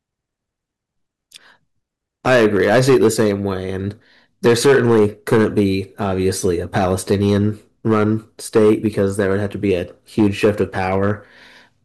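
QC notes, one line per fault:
Throughout: hard clipping. Peaks overdrive the stage by about 9 dB, so a few percent of samples are cut flat. Loud speech turns harsh and fuzzy.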